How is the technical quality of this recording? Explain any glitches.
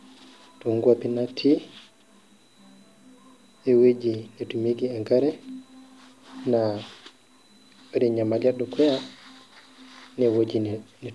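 No glitches can be heard anywhere in the recording. The speech runs without a break or disturbance, so there is nothing to explain.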